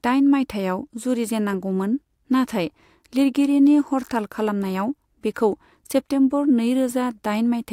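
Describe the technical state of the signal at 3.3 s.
At 3.3 s the speech signal is intact, with no technical fault present at that moment.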